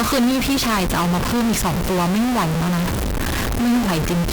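Across the whole speech clip, a harsh, buzzy distortion, likely a stuck bit, adds steps of roughly -15 dBFS. Unlike clipping, it also fills pauses with noise.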